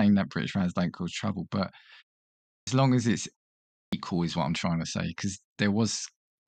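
Clipped start after a pause at 2.59 s and again at 3.84 s: after pauses of 0.65 s and 0.56 s, the output device had dropped into sleep and needed time to wake, so about 81 ms and 86 ms of the returning speech were swallowed, making it begin abruptly without its first sounds.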